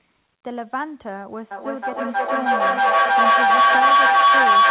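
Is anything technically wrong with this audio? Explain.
Yes. From 1.51 s to the end of the clip there is a feedback howl. Sound loops from a loudspeaker back into a microphone in the same room and gains level on each pass, so it builds to a tone around 1 kHz. The loop repeats roughly every 300 ms, and the tone peaks about 14 dB above the speech. Unlike ordinary echo, whose repeats fade, these repeats keep growing and narrow toward a single pitch. The whole clip also tops out near 4 kHz, which fits a narrowband call codec.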